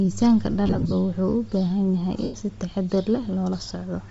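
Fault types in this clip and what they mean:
Bluetooth LC3 compression: The speech has a plainly audible breathy, grainy edge throughout. The upper spectrum sounds thinned out and replaced by hiss-like fill rather than real detail. That points to a transform codec running at a low rate, most likely LE Audio's LC3. The degree of damage fits roughly 32 kbps with short 7.5 ms frames. The top end loses definition.
Lost LE Audio frames: Twice the speech drops out and is patched over. The decoder fills missing blocks by repeating the last spectrum with scrambled phase. From 0.67 to 0.93 s the gaps are scattered. They total about 150 ms over roughly a quarter second, with the longest run near 30 ms. At 2.23 to 2.34 s, between "baahan yahay" and "si taxadar", about 105 ms is lost in one stretch.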